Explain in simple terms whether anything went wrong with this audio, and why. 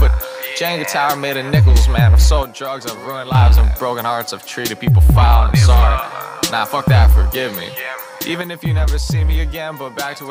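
Twice the sound abruptly drops to about half its level: from 2.43 to 3.35 s, and again from 8.42 s to the very end. That's most likely one channel dropping out, where one side of the stereo signal vanishes.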